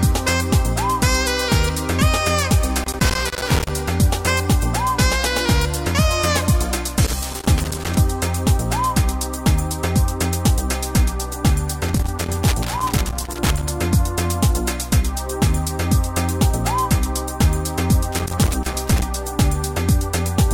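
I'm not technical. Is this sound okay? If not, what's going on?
No. Loose connector crackle breaks in at 2.8–3.7 s, 7.0–8.0 s, 11.9–13.7 s and 18.1–19.0 s. A worn or dirty plug contact keeps connecting and disconnecting as it shifts, chopping the sound into uneven bursts of scratchy crackling.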